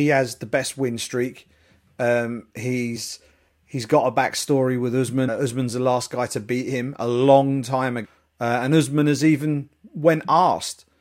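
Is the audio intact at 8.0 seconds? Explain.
No. Just after "him a long time", from 8.04 to 8.06 s, the speech is hit by damaged data in a compressed stream. Corrupted bytes in the coded stream made the decoder misread those frames and lose sync until it found the next valid frame header, producing a brief chirp, squawk, click or short hole.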